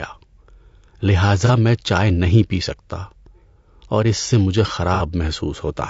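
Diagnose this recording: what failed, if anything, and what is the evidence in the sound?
Codec stage. The speech sounds rough and grainy throughout, with noise between the harmonics. This is likely low-delay AAC compression, fitting a low bitrate around 32 kbps.

Network stage. AAC frame loss with concealment causes smeared, noisy patches at 1.46 to 1.51 s, before "میں چائے نہیں پی", and at 4.94 to 5.03 s, after "اور اس سے مجھے". The decoder rebuilt each gap from the last good spectrum.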